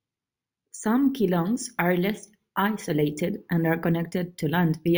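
From the start of the speech to the end, the clip carries imaging from sample-and-hold upsampling. Each original sample was repeated to fill the higher rate with no smoothing filter, which fits a 16 kHz source raised to 48 kHz. Mirrored copies of the speech spectrum result, the first occupying 8 to 16 kHz at about 22 dB below the signal. It sounds like a bright, metallic fizz riding on the speech and rising and falling with its level. Within that lowest copy, components move downward as the pitch moves upward.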